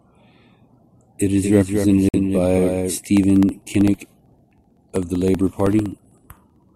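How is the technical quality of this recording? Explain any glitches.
The recording has three glitches, all after the first second or so.

From 1.43 to 2.98 s there is a doubled audio track: a second full-band copy of the speech trails about a fifth of a second behind, roughly 5 dB quieter. It is likely captured twice through a slower path. On a spectrogram the harmonics appear twice, offset in time, with the copy appearing and vanishing abruptly.

At 2.09 s, inside that doubled stretch, the sound drops to silence for 50 ms and then resumes. This is likely a Bluetooth stall, where delayed packets left the playback buffer empty. The waveform shows a flat gap, and the spectrogram a clean vertical blank band.

From 3.17 to 6.69 s there are periodic USB or driver dropouts. Every 64 ms, about a millisecond of audio is replaced by silence, roughly fifty times, as a blocked bus or driver loses samples. 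These are heard as a regular ticking under the speech. They show as evenly spaced thin vertical lines on the spectrogram and tiny notches in the waveform.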